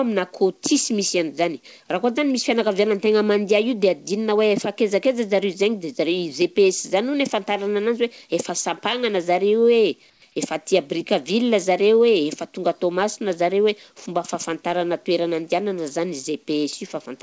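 From 10.10 to 10.22 s, the sender likely stopped transmitting during a detected pause, and the receiver filled the gap with comfort noise in place of the background. For 120 ms the real background becomes a flat, featureless hiss about 7 dB quieter.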